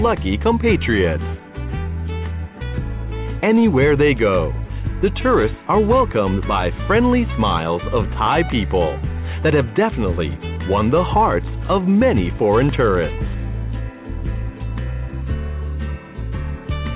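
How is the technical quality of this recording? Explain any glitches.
No glitches turn up anywhere in the recording; the audio has the narrow-band character of a telephone-grade call path, with nothing above 4 kHz, which fits G.711 A-law coding at 64 kbps.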